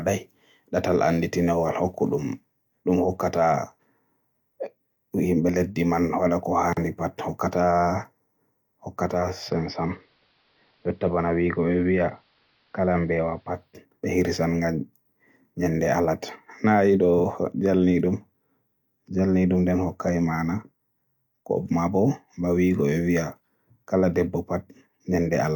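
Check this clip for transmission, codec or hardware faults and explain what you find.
One fault: from 9.04 to 13.87 s, digital radio blending to analogue. The receiver lost the digital stream and cross-faded over 0.47 s to AM, dulling the speech, dropping it about 1 dB, and adding faint hiss.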